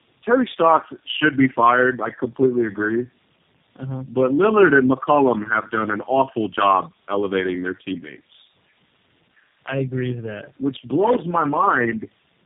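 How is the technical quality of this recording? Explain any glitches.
Quality is poor for the whole recording because of one fault that never lets up.

Tandem speech coding, throughout: the speech went through three low-rate codecs in a row, AMR-NB at 5.9 kbit/s and then G.729A twice, each re-encoding the previous one's degraded output. It sounds rough, muffled and warbly, with nothing above 3.7 kHz.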